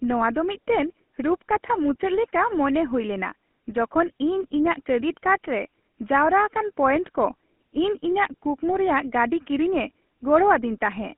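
The speech has passed through the GSM full-rate codec for its whole length. This early mobile-phone coder replaces the real voice with a vocal-tract model excited by a sparse, regularly spaced pulse train, at a rate that fits 13 kbps. The band is squeezed to a telephone line of about 200 Hz to 3.4 kHz, so the voice sounds thin and muffled at the top. The coarse excitation leaves a plainly audible buzzy, gravelly roughness throughout.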